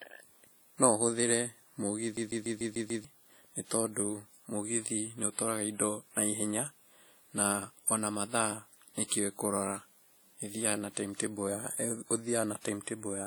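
Right from the start the speech carries a washy, ringing quality, with hiss that swells and fades along with the signal. That's most likely WMA compression: a transform codec smearing quantisation noise over long blocks, plainly audible here and consistent with a low bitrate around 48 kbps, with nothing above 20.1 kHz.

From 2.17 to 3.05 s there's a classic CD stuck on one turn. The same 0.15 s snippet loops six times with a tiny mute at each jump, the way a scratch keeps kicking the laser back a track, before playback carries on into "nĩ tondũ mũgithi nĩ".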